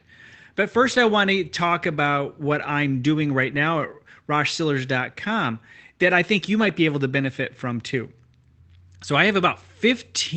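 In this speech clip, a brief rough, noisy patch at 6.61 s, between "that I think you" and "be able to benefit", is a lost packet rebuilt from error correction: the decoder played a low-bitrate copy (fitting one 20 ms packet) from the following packet over the Opus call path, whose band stops near 8 kHz.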